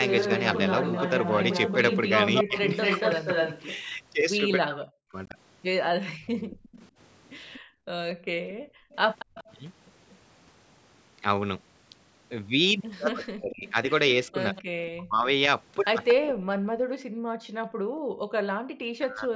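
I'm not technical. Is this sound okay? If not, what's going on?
No. There are three problems, all typical of a call where someone is using a speakerphone.

From 0.08 to 10.15 s, and again from 13.67 to 16.14 s, you can hear a second, delayed copy of the talking trailing about 233 ms behind the original. It's fairly loud in the first stretch and quieter in the second. This is an echo leak. The other side was likely playing the call through a loudspeaker, and their echo canceller failed to remove what their microphone picked up from it, so that sound came back down the line.

Between 2.43 and 9.38 s, and from 13.13 s to the end, the talker's voice keeps dipping, sometimes almost to silence, in short pieces that add up to roughly a second and a half in each stretch. This is speech suppressed in double talk. Both sides were likely talking at once, and the echo canceller couldn't tell its own talker apart from the loudspeaker echo, so it turned everything down together.

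The room sound behind the talking also drops away. Between 7.6 and 9.35 s it dips briefly, for well under a second in total. Between 16.87 and 18.7 s it falls much deeper and stays down for about two seconds. This is background gated by the echo canceller: while the loudspeaker was playing, the canceller clamped the microphone down hard, and the background only returns when it lets go.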